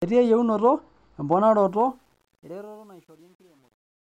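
From 1.68 s to the end at 4.19 s, the fade-out that starts about 1.7 seconds in carries truncation distortion on a fade. The gain stage keeps too few bits, which fits roughly a 9-bit word, and adds no dither, so quiet samples collapse onto a few coarse steps. Beyond 2.38 s the tail turns gritty. Unlike steady hiss or a gate's chatter, the grit grows as the fade gets quieter.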